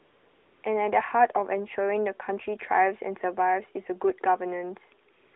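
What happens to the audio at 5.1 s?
At 5.14 s the phone's voice activity detection judged the talker silent and stopped sending speech frames for 200 ms, so this is AMR comfort noise: until 5.34 s the receiver substitutes smooth synthetic noise for the real narrowband background, switching abruptly in and out.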